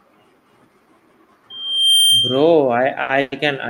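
A speech recording with three faults. From 1.50 to 2.55 s there is loudspeaker feedback squeal. A steady tone at 3.2 kHz swells over roughly half a second and sits a few decibels above the speech. The microphone is hearing its own loudspeaker, and the loop gain at that frequency has passed unity. At 3.02 to 3.12 s there is a short stall from a late packet. The last sound is held for 70 ms, with a slight buzz or dip. The jitter buffer ran dry while a packet was late. Playback then resumed where it stopped, so nothing is lost. From 3.21 to 3.35 s the audio hangs again as a fading buzz or hiss lasting 110 ms, never falling to silence, and again nothing is skipped. This is a call audio freeze, likely from packets held up in transit emptying the buffer.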